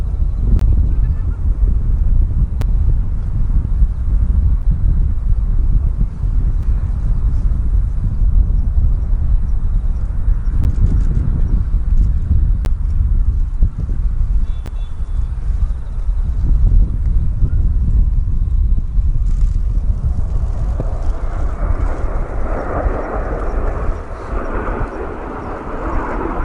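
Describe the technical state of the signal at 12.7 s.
A gap between stream segments at 12.65 s: misaligned timestamps leave about 11 ms that the player fills with silence, a brief hard-edged dropout with no audio lost.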